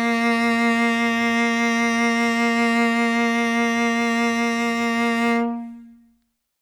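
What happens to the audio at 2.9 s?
Nothing goes wrong at 2.9 s: the music plays through that moment intact, with no dropout, click, glitch or other fault.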